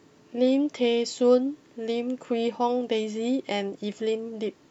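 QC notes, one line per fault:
Nothing to flag here, the speech comes through without any faults worth a line.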